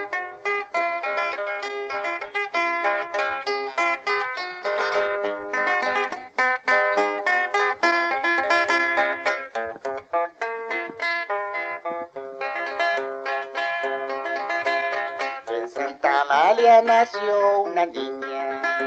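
No faults can be heard anywhere in this recording.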